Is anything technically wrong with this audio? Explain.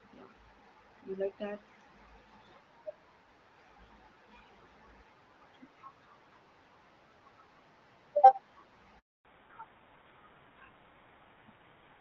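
Yes, there are two problems, and they come together near the end of this speech clip.

First, a handover gap from 8.99 to 9.25 s. The call was switched from one network to another, and for about 260 ms no speech frames got through. The voice drops away almost instantly and you get dead silence until the new link picks up, so whatever was said in that stretch is simply gone.

Right after the gap, from 9.25 s to the end, there's a fallback to narrowband. Before the switch the call was on the AMR-WB (HD Voice) codec, and the clarity there fits its 12.65 kbit/s mode. After the switch, nothing above 4 kHz comes through, which points to an older narrowband codec like GSM full rate at 13 kbit/s. The speech suddenly sounds duller, more boxed-in and a bit rougher, like dropping from a decent call to an old landline.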